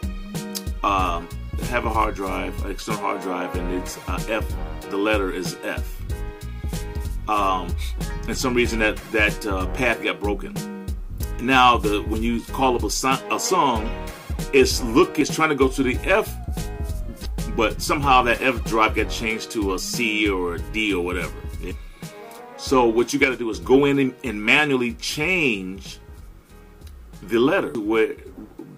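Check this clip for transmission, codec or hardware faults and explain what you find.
Two faults are audible: four short bursts from damaged data in a compressed stream, and one brief stereo channel dropout.

Damaged data in a compressed stream occurs at 15.21, 17.25, 21.71 and 27.75 s. Corrupted bytes leave the decoder unable to parse those frames, so it loses sync and hunts for the next valid header. Each event is a short chirp or blip.

From 23.24 to 23.54 s the sound abruptly drops by about 6 dB, then returns to full level. The likely cause is one channel dropping out: with one stereo side missing, the mono sum keeps only half of the shared content, and material unique to that side vanishes.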